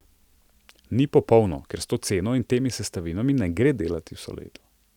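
No faults are audible anywhere in the speech.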